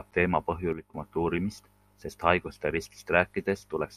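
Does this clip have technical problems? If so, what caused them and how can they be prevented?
Yes. There's a sudden gain jump from 0.73 to 0.94 s, where the level drops by about 9 dB in a single step and then snaps back. The speech and the background noise fall together, which points to the digital gain being switched from one sample to the next, likely a gain setting or bit shift applied with no ramp. To prevent it, smooth any gain change over a few milliseconds instead of applying it instantly.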